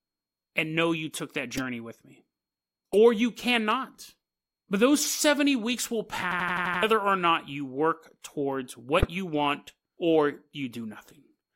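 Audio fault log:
1.54–1.62 s, 2.92–2.95 s, 8.99–9.08 s: corrupt frame decoded. Damaged compressed frames, a few each time, play as brief chirpy noise bursts, with no repetition of earlier sound.
6.32–6.83 s: system hang loop. An 85 ms chunk, fitting a 4096-sample buffer, repeats six times at 11.7 Hz. It sounds like a stutter, not a chirp, and about half a second is lost.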